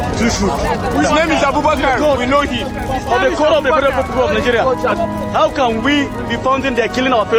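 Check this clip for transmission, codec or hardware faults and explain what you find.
I find no faults to report in this clip.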